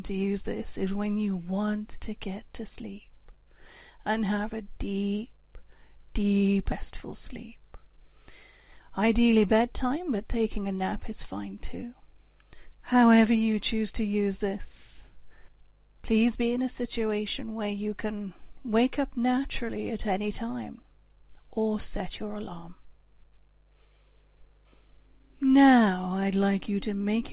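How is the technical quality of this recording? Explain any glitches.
The recording has three distinct problems: a constant hum, one abrupt jump forward, and a short hurried stretch. The sound is also band-limited, with nothing above 4 kHz, which fits a narrowband telephone codec such as G.711 A-law at 64 kbps.

Mains hum runs through the whole clip. A ground loop or a nearby transformer has let the 50 Hz power supply leak into the signal path. That adds a steady low 50 Hz drone, with some low harmonics, sitting about 35 dB below the wanted audio. It is quiet, but it is always there and is most noticeable in pauses and low-level passages.

A skip ahead happens between 6.72 and 6.74 s. Roughly 0.4 s of audio was discarded, either in transit or when the receiving jitter buffer overflowed and dropped material while newer audio was already queued. Nothing fills the hole. The sound before and after is spliced almost directly, so it jumps forward abruptly and that portion of the content is lost.

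A jitter buffer speed-up runs from 8.56 to 10.80 s. The buffer was holding more audio than its target, so the receiver repeatedly cut out tiny pitch-period-sized pieces, about a fifth of a second in total, to bring the delay back down. Playback runs at about 109% speed while the pitch stays unchanged, so this stretch sounds slightly rushed.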